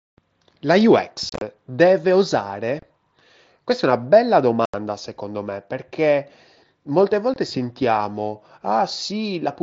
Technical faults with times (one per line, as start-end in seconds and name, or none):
1.29-1.42 unconcealed Bluetooth headset packet loss
2.79-2.83 unconcealed Bluetooth headset packet loss
4.65-4.74 unconcealed Bluetooth headset packet loss
7.34-7.36 unconcealed Bluetooth headset packet loss